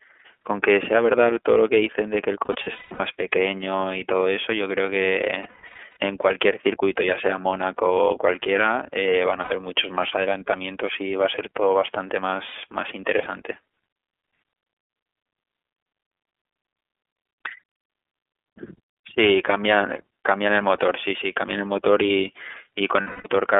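The whole recording passes through the iLBC codec, a narrowband VoIP coder. Its band stops near 300 Hz and 3.4 kHz, so the speech sounds thin and boxy. Each 30 ms frame's excitation is coded on its own, leaving a plainly audible rough, slightly synthetic texture, which fits the 13.33 kbps mode.

Lost iLBC frames cause five gaps. The decoder fills each missing stretch by repeating the last pitch cycle blended with noise, which sounds like a held, buzzy or breathy vowel. From 2.46 to 3.00 s, about 330 ms is missing, scattered over 540 ms, with the longest run around 200 ms. From 5.43 to 5.97 s, about 360 ms drops out over 540 ms, with runs up to about 150 ms. Shorter losses follow at 9.41 to 9.52 s (90 ms) and 12.47 to 12.55 s (60 ms). A final 240 ms loss runs from 23.01 to 23.27 s. Because iLBC frames stand alone, the voice returns straight after each gap.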